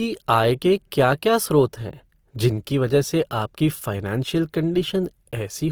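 Throughout, the speech was likely squeezed through Opus compression in its music mode at a low rate, near 24 kbps. With too few bits, bands are refilled with folded or noise content, so voiced sounds turn rough and grainy, though the band still reaches 20.2 kHz.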